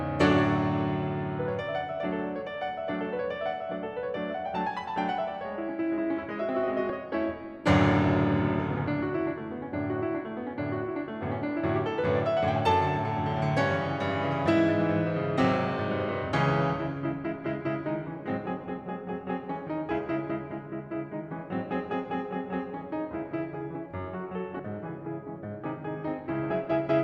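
At 6.90 s and 24.59 s the music skips ahead by roughly 70 ms and 100 ms, which fits compressed frames skipped: about two, then three, 32 ms frames lost.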